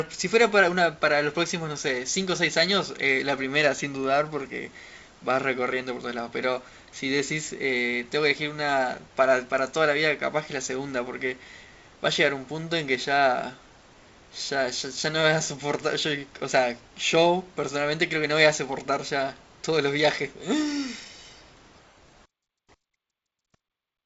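No technical faults are audible.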